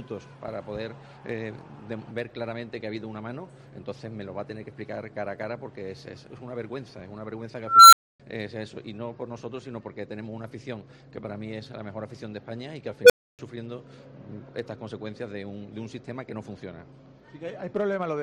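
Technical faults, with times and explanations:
7.67–8.20 s and 13.04–13.39 s, unstable filter: a recursive filter with bad coefficients feeds its output back until it overflows. A squeal around 1.5 kHz swells over 0.25 s, then one near 500 Hz within 58 ms; each clips, then drops to silence for 270 ms and 290 ms until the filter resets.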